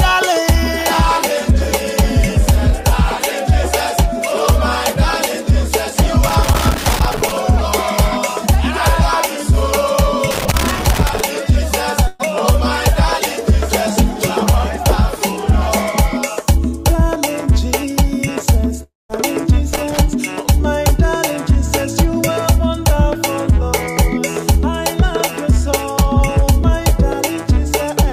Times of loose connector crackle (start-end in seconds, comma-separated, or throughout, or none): 6.29-7.32, 10.31-11.20, 19.74-20.00